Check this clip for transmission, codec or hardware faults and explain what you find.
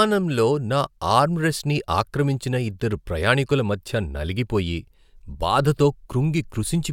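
Nothing in the speech signal points to a transmission, codec or hardware problem: the level, bandwidth and continuity hold steady throughout.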